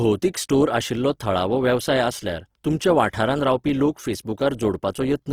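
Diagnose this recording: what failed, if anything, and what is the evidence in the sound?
Opus compression throughout, likely at the codec stage: content reaches 20.3 kHz yet sounds grainy from noise-filled bands, fitting CELT mode near 16 kbps.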